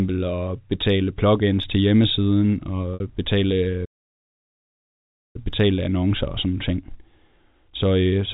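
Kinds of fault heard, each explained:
Packet loss with pitch repetition: Right after "betale plugins til hjemmesiden", from 2.94 to 3.00 s, about 60 ms of audio goes missing, a gap that fits two lost packets. The receiver fills it by repeating the last pitch period, so the speech briefly takes on a held, buzzy quality before "betale betale annoncer og" resumes. On a spectrogram, the harmonics run flat and unchanging across the gap. The waveform shows one cycle copied over and over, fading out over about 50 ms.
Playback stall: From 3.85 to 5.36 s the output stops mid-flow and stays silent for about 1.5 s. The player most likely ran out of buffered data or had its thread blocked. Playback then picks up with "betale annoncer og sådan". On the waveform this is a flat, silent stretch. On a spectrogram it is a clean blank column across every frequency.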